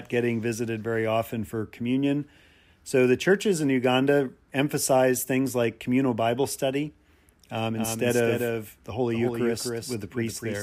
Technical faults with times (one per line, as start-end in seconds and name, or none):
7.76-10.63 doubled audio track